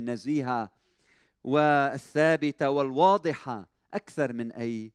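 Speech, with no audible faults.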